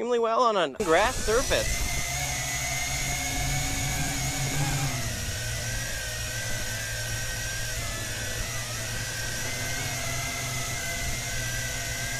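No dropouts, clicks, distortion or other technical faults turn up anywhere in the clip.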